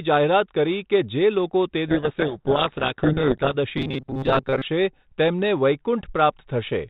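A speech recording carried over G.726 ADPCM at 32 kbit/s, band-limited below 4 kHz, shows two faults. From 1.88 to 3.55 s a codec payload misread occurs: the receiver unpacks the G.726 code words with their bits in the wrong order, so each decoded difference value is wrong and the speech is buried under harsh, grinding distortion until correct decoding resumes. From 3.78 to 4.63 s there is robotic sound from repeated short buffers. The audio becomes a rigid, metallic buzz at 133 Hz that roughly tracks the speech. This is likely caused by audio arriving too seldom, with a segment of about 7.5 ms being replayed to fill the gaps while roughly half of the real audio is skipped.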